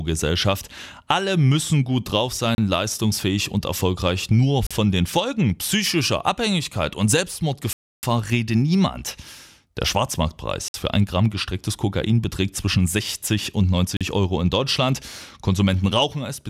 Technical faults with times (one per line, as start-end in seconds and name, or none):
2.55-2.58 Bluetooth stall
4.67-4.71 Bluetooth stall
7.73-8.03 Bluetooth stall
10.68-10.74 Bluetooth stall
13.97-14.01 Bluetooth stall